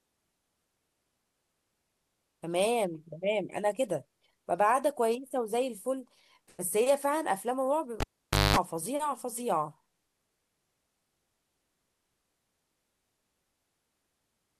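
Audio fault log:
8.00–8.56 s, cable pulled and plugged in: a pop cuts the speech to near silence for 510 ms, with 212 ms of 50 Hz mains buzz within it, then a second pop as sound returns. A live lead was pulled and reinserted, buzzing while only its tip touched.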